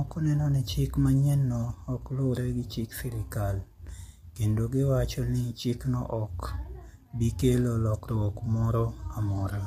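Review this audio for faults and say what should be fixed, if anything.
Low-delay AAC compression runs through the whole clip. The speech sounds rough and grainy, with noise filling the gaps between pitch harmonics and nothing above 15.6 kHz. This damage is plainly audible and is likely caused by AAC-ELD, whose short frames resolve harmonics poorly and spend bits inefficiently. The degree of grain points to a bitrate of about 32 kbps, too low for clean speech with this codec. To prevent it, raise the AAC-ELD bitrate or record the source with a higher-quality codec.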